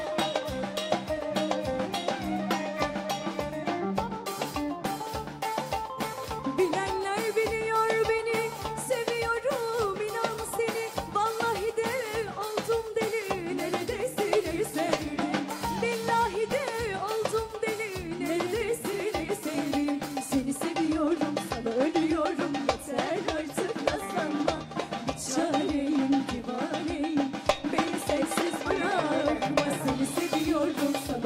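No technical faults are audible.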